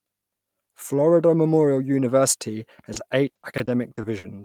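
Repeated packet loss runs from 2.93 to 4.25 s. Short holes, the longest 60 ms, are patched by repeating prior sound, leaving choppy, robotic speech with pieces missing. At 3.54 s, chunks out of order: a 20 ms chunk arrives two chunks late, causing a brief jumbled stutter.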